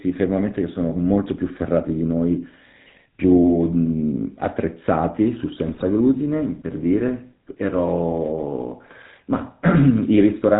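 Throughout, the speech carries the buzzy, gravelly roughness of the GSM full-rate codec, consistent with its 13 kbps coding. A vocal-tract model driven by evenly spaced pulses, keeping only every third excitation sample, produces this grain, and nothing passes above 4 kHz. Unlike plain band-limiting, the roughness sits inside the voice itself.

From 5.68 to 5.85 s, GSM bit errors break the voice into squawks, pops and gargling, a span that fits about eight 20 ms frames. Corrupted filter, pitch and gain values distort the spectrum and level frame by frame, so unlike a clean dropout the sound turns garbled rather than silent.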